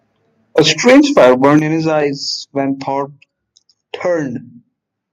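Microphone overload runs from 0.58 to 1.58 s in this speech recording: the peaks push about 8 dB past the converter's ceiling and their tops are sliced flat, roughly 7 percent of samples, giving the loud syllables a harsh crackle, most likely from excessive input volume. Microphone volume stepped down at 0.59 s, by about 4 dB, and again at 1.59 s, by about 8 dB, just before "in his eyes". Each drop is a sudden fall in overall level, likely the call software reducing input gain in response to the clipping.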